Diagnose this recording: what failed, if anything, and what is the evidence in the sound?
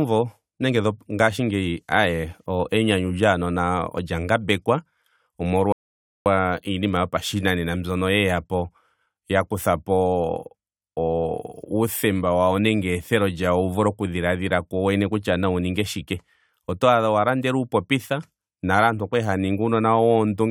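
A rebuffering stall at the playback stage: the speech stops dead at 5.72 s, holds silence until 6.26 s, then resumes with "iinima yopashinanena mbyono yeyapo" exactly where it left off. Unlike a packet-loss dropout, no speech is skipped. The player simply waited, adding about 0.53 s.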